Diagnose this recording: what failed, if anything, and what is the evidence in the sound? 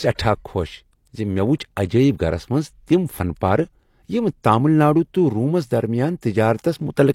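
Codec-stage pre-echo: brief hiss smears ahead of speech attacks at 1.59, 1.89 and 6.21 s, spreading 13 to 17 ms early. Quantisation noise fills each transform block before the attack, unlike reverb, which trails after.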